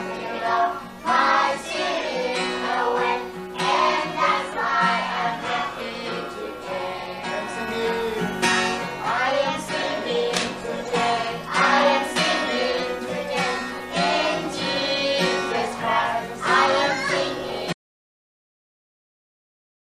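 At 17.73 s the sound just stops dead and never comes back, so the last 2.22 s of the clip is pure silence, with not even room tone underneath. That's an audio dropout to silence: the input was likely lost, say a device unplugging, a link failing or something getting muted, while the recorder kept writing silence. Whatever was happening after that point simply isn't there.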